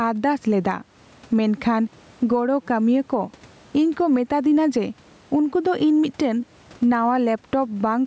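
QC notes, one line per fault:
throughout, gain pumping: a breathing gain swing of around 10 dB, with loud and quiet passages squeezed close together in level. The likely cause is microphone gain set far too high, with a fast limiter or compressor clamping down on each peak and letting go in the gaps.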